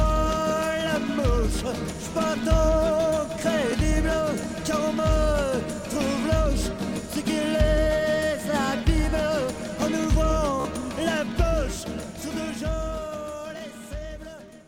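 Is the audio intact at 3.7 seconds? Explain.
No. A Bluetooth stutter runs from 3.72 to 3.75 s. A packet of audio failed to arrive in time, so the receiver filled the gap by replaying the slice it had just played, looping it briefly until fresh data came. The result is a short repeat lasting about 30 ms. When the sound resumes it has jumped ahead by roughly 14 ms, which fits a single lost packet.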